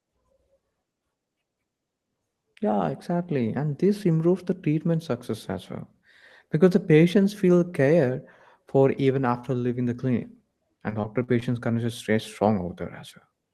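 From 10.89 to 11.43 s, repeated packet loss (robotic sound): four short dropouts, longest 44 ms, patched by extending prior audio, giving choppy fragments across roughly a fifth of the span.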